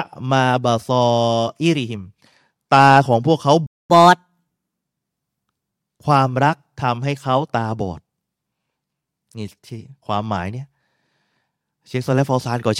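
A speech recording with a playback stall at 3.66 s: the sound halts mid-flow for about 0.23 s. The likely cause is the player running out of buffered data or having its thread blocked. From 3.90 s to 4.83 s comes catch-up at higher speed. The audio plays at 1.25 times normal rate, so the talking sounds hurried and roughly four semitones higher while the backlog is cleared. It then drops back to normal. Because tempo and pitch rise together and only straight after the gap, it reads as resampled catch-up rather than a standalone pitch-shift fault.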